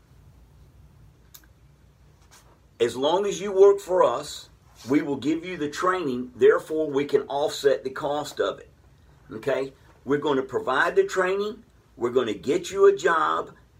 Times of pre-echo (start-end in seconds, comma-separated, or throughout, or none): none